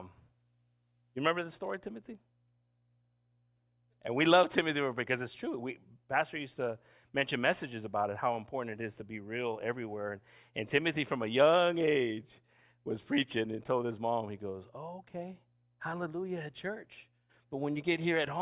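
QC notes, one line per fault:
No fault found in this speech clip.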